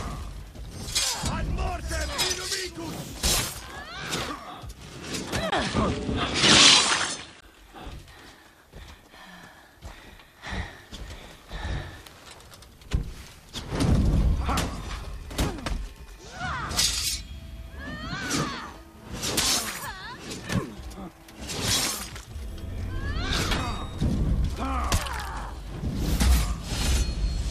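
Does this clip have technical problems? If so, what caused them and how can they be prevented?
Yes. From 5.50 to 7.43 s, after a 20 ms gap, the audio loses everything above 10.5 kHz, shifts level by a few dB and gains a faint new noise floor, likely an input switched to a poorer device. Locking the recording input to one fixed microphone prevents this.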